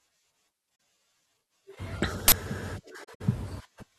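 Speech drops into brief, soft-edged silences at 0.76 to 0.80 s and again between 3.03 and 3.22 s, where several short gaps cluster and the longest run lasts about 70 ms. This is AAC frame loss with muting. When frames go missing, the decoder zeroes their spectrum, and the overlapping transform windows fade the sound out and back in rather than cutting it sharply. The first hole's 42.7 ms fits two lost frames, while the later stretch loses 106.7 ms of audio spread across 170.7 ms. At 2.28 to 2.32 s a sudden, loud burst of harsh digital noise replaces the speech for 40 ms. That is an uninitialised buffer: a block was sent to the output before any audio had been written into it, so whatever stale data sat in that memory was played back as samples, producing noise with no relation to the surrounding speech.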